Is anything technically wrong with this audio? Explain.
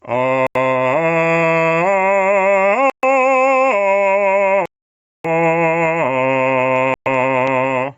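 Yes. This music clip has two problems. Throughout, there is gain pumping, most likely from an input gain set far too high with a fast limiter or compressor clamping it down on every loud passage. Each strong hit pulls the level down by roughly 10 dB, then the gain climbs back in the quieter moments. Loud and soft parts sit unnaturally close in level, and the music sounds squashed and breathing.

There are also four Bluetooth stalls, likely caused by radio interference delaying packets until the headphones' buffer ran empty and playback halted while waiting for retransmissions. The audio drops to silence at 0.47 to 0.56 s for 87 ms, at 2.90 to 3.04 s for 132 ms, at 4.66 to 5.26 s for a much longer 589 ms, and at 6.94 to 7.07 s for 120 ms. Each time it resumes where it stopped or slightly further on. The top end stops at 8 kHz, consistent with a call's microphone processing.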